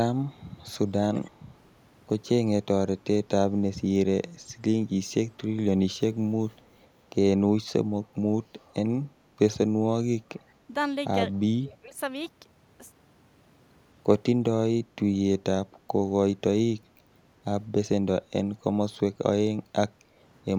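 At 1.14 to 1.31 s a delayed copy of the speech comes back, trailing the original by 216 ms and sitting roughly 15 dB below it. This is echo leak, likely from a far end on loudspeaker whose echo canceller let part of its microphone pickup through. A second, much fainter leak follows at 6.52 to 6.74 s with the same 216 ms delay, around 40 dB down. The fixed delay and separate, quieter copy set it apart from room reverberation, which smears continuously rather than repeating a distinct image.

From 11.47 to 11.97 s, about half a second, the talker's level sinks by as much as 20 dB while the other side is speaking. This is speech suppressed in double talk. The echo canceller, likely unable to tell its own talker from loudspeaker echo, pulled both down together. Unlike a dropout or packet loss, the speech is attenuated rather than replaced by silence or glitches, and the dip is tied to the overlap.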